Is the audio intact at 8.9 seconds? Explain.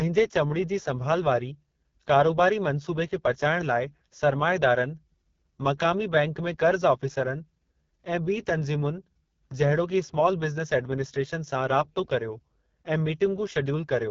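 No. At 8.9 seconds the speech sounds rough and raspy, with heavy coding damage, and this runs through the whole clip. The cause is the AMR wideband (HD Voice) codec at about 6.6 kbit/s, its lowest rate. Below 6.4 kHz it rebuilds speech from a pulse-driven vocal tract model, fills the top band with shaped noise, and has nothing above roughly 7.3 kHz.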